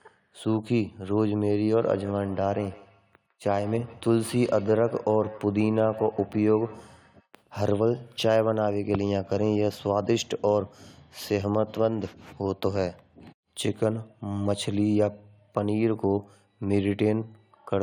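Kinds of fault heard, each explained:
Feedback echo between two devices: from 1.78 to 7.28 s the speech is trailed by repeats arriving about every 150 ms, each one thinner and more ringing than the last, the strongest sitting about 19 dB below the talker. This happens when two devices in the same room share a call: one plays back what the other's microphone captured, that microphone hears it again, and each echo canceller only removes its own device's playback, so the loop goes unchecked.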